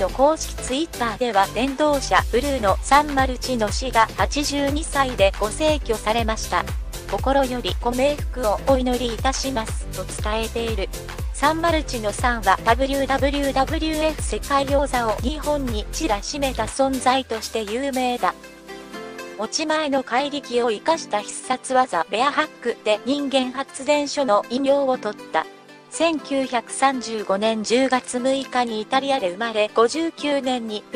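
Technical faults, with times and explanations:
Nothing here to flag: no technical faults turn up anywhere in the recording.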